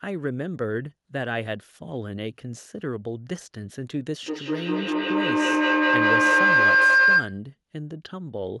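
Speech, with a feedback howl from 4.23 to 7.46 s. A mic-to-speaker loop gains level each pass. It rings near 1.5 kHz, repeats about every 200 ms, and peaks about 12 dB above the speech.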